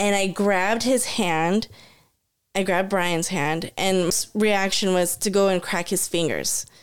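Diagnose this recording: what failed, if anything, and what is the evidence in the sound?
A CD skip at playback: at 4.10 s, after "hand and", the speech cuts out in a tick-like mute of roughly 10 ms and resumes at a different point, landing on "reaction was to". Unlike a simple dropout, the audio doesn't pick up where it stopped; the laser has jumped tracks on the disc's spiral.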